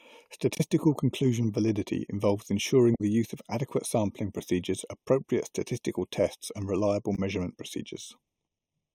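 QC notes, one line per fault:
Throughout: channel delay (comb filtering). One channel trails the other by roughly 0.3 ms, so the mono sum cancels at evenly spaced frequencies from around 1.5 kHz, leaving the speech hollow and phasey.
0.55–0.61 s, 2.94–3.01 s, 7.15–7.19 s: damaged data in a compressed stream. Corrupted frames make the decoder lose sync and hunt for the next header, giving brief glitches.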